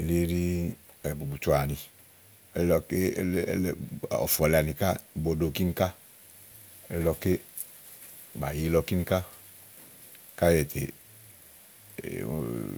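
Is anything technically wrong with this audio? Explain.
Yes. CD scratch ticks, from 7.07 to 7.45 s: a disc blemish defeats error correction once per rotation, so the player patches the samples, giving four brief ticks, the longest about 3 ms, in the speech.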